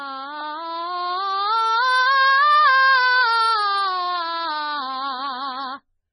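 From start to finish the music stops dead above 9.7 kHz and swirls wetly, weak detail flickering in and out. That points to MP3 compression at a very low bitrate, likely near 16 kbps. A plain low-pass filter would dull the treble without the swirl.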